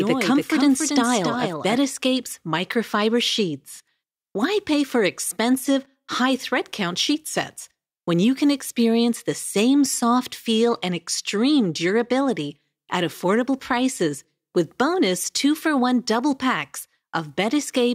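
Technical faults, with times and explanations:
0 to 1.76 s, doubled audio track: a second copy of the same signal is likely being picked up through a slower capture path, or an edit holds two copies out of step. A full-band duplicate trails the original by about 300 ms at roughly 5 dB lower. It is already present as the clip begins and then cuts out abruptly at 1.76 s. It carries no decay or room colour, so it sounds like a clean, dry repeat rather than reverberation.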